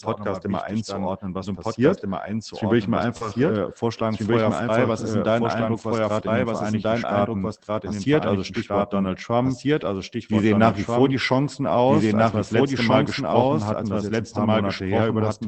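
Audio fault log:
throughout: doubled audio track. A second, full-band copy of the whole sound runs about a second and a half behind the first, at roughly the same level, so every phrase is heard twice and the two overlap into a confusing layer of echo. The copy has no decay or room colour, unlike a real reflection. This most likely comes from the signal being captured a second time by a slower path, or from an edit leaving two out-of-step copies in the mix.
3.17–3.23 s and 7.55–7.66 s: short concealed packet loss. At 3.17 s about 40 ms of audio never arrived in time. The receiver filled about 33 ms by extending the preceding sound, producing a brief smear before the real signal returns. At 7.55 s a 20 ms hole was only partly filled, and the timing stretches by roughly 15 ms, a small wobble rather than a clean continuation.
3.21 s, 4.41–4.47 s, 5.61 s, 6.59 s, 7.56 s, 13.47 s: lost packet rebuilt from error correction. 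Each of these spots is 20 ms long, except 4.41–4.47 s, which is 40 ms from two packets. The first one, at 3.21 s, falls just before "äh vorschlagen". The one at 5.61 s sits between "ist denn dein" and "was gerade in den", and the one at 6.59 s follows "was gerade in den". At each spot a lost packet was replaced by the low-bitrate copy carried in the next packet, so nothing drops out, but those moments sound briefly rougher and noisier. The Opus call path carrying this, at what sounds like about 24 kbps, tops out around 8 kHz.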